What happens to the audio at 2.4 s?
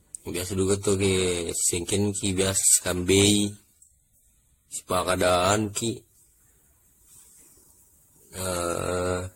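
Generation loss is present at 2.4 s and throughout, likely from around seven AAC-style re-encodes, each requantising afresh. The speech sounds swirly, hollow and smeared, with nothing above 16.5 kHz.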